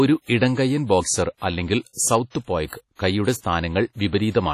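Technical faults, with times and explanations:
Throughout: WMA compression, likely the cause of the heavy codec damage. The speech rings and sounds washy, with a hiss that swells and fades with the signal. Nothing is heard above 15.2 kHz. The quantisation noise fits a low bitrate near 32 kbps.
3.38 to 3.43 s: pre-echo. A sharp attack arrives with a short hiss about 55 ms before it. The transform block spreads its noise evenly, so noise sized for the loud onset also fills the quiet moment ahead. The attack sounds smeared.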